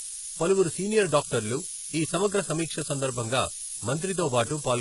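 Throughout, the speech is quantised to what sounds like only 4 bits with noise shaping, pushing the rounding error upward into a thin, steady hiss about 5 dB louder than the speech itself. Heavy HE-AAC compression, likely at a bitrate around 12 kbps, rebuilds the treble from copied lower bands, leaving s sounds gritty and metallic, with nothing above 11.1 kHz.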